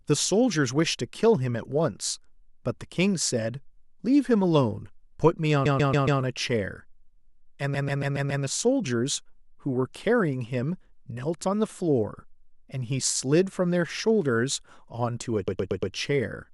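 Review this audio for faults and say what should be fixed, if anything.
Repeated frames cause stutters in the speech at 5.64–6.20 s, 7.73–8.43 s and 15.47–15.93 s. A 139 ms block, or a 116 ms block in the last event, plays again four or five times. To prevent it, make sure each compressed frame is written or sent only once.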